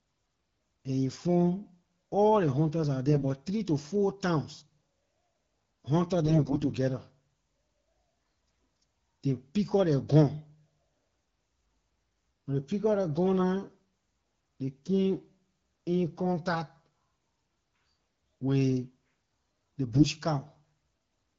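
AMR bit errors at 3.08 to 3.24 s, 6.25 to 6.66 s and 19.92 to 20.05 s flip weakly protected frame bits, misplacing excitation pulses and skewing pitch, gain and spectral values. The speech keeps its pitch and level but turns hoarse, scratchy and gargly. The longer middle burst has around a tenth of bits hit.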